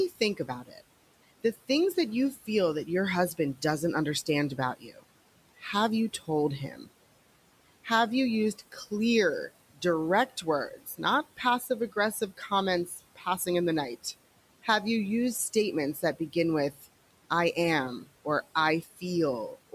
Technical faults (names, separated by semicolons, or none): speech cut by the noise suppressor